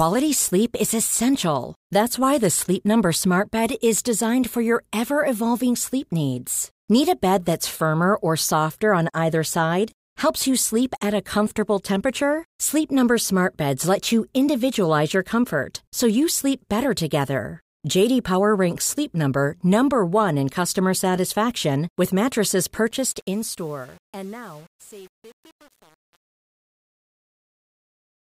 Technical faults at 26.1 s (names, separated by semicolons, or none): truncation distortion on a fade